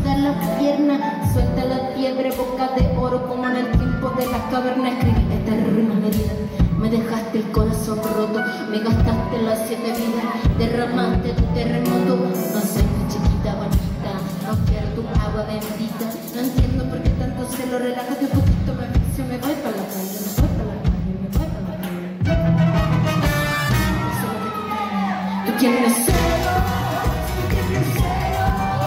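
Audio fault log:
12.66–12.69 s, compressed frames skipped: the sound briefly jumps forward. Roughly 20 ms of audio is missing. That fits one or a few compressed frames that were either absent from the stream or thrown out by the decoder as damaged.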